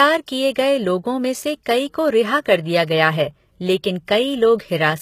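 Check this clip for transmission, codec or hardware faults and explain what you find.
Two faults are audible: codec damage across the whole speech clip, plus a brief pre-echo near the start.

The whole clip sounds like it has been through HE-AAC compression, and that's the likely cause. The damage is plainly audible. Nothing comes through above 14.9 kHz, and the top end that remains is a rebuilt copy of lower bands rather than the real thing. The harmonics don't line up where the reconstruction takes over, so sibilants come out gritty and metallic. The amount of damage fits a low bitrate of around 20 kbps.

At 0.54 s, just before "गए लोगों में से", there's a pre-echo lasting about 16 ms. The codec spreads its quantisation noise across a whole block, and this attack sits late in one. The noise sized for the loud onset leaks into the quiet moment ahead of it, so you hear a short hiss leading in, and the attack itself sounds softened and smeared.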